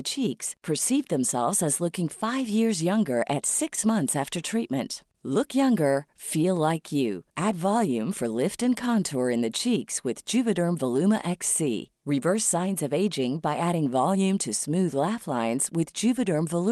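No faults can be heard in this speech, which carries only the ordinary coding character of a call path whose top end stops around 12 kHz, consistent with Opus at a moderate bitrate.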